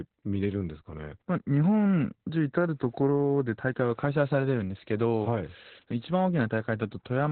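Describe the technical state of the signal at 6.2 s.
At 6.2 s, as throughout, Opus voice compression in SILK mode cuts everything above 4.3 kHz, leaving muffled, hoarse, slightly robotic speech that fits a bitrate of about 8 kbps.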